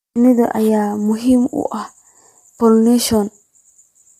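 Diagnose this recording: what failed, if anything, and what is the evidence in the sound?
The codec stage failed, most likely low-delay AAC compression (AAC-ELD). The speech sounds rough and grainy throughout, with nothing above 15.6 kHz, which fits a bitrate around 32 kbps. Its roughly 10 ms frames resolve pitch harmonics poorly, leaving audible coding damage.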